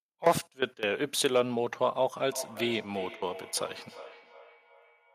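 From 2.26 s onward, speech returns roughly every 0.4 s at about 17 dB down: feedback echo between two devices, a microphone re-capturing another device's playback.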